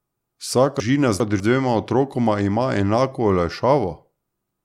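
From 0.8 to 1.4 s the speech jumbles, a case of chunks out of order: one 200 ms chunk plays two chunks late, after those meant to follow it, leaving three hard joins. Unlike a dropout, no sound is missing, only reordered.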